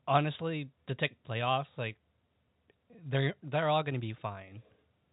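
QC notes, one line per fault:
No faults found; the speech sits in a narrow telephone band with nothing above 3.8 kHz, as expected of G.711 telephone coding.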